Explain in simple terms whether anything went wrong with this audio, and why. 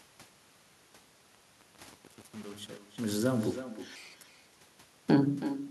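The far end played the call on a loudspeaker with no echo canceller, so every stretch of speech returns about a third of a second later as a quieter, thinner copy. During the fade from 0.0 to 3.83 s, the volume stage kept too few bits and added no smoothing noise, causing truncation distortion that makes the quiet end of the fade gritty.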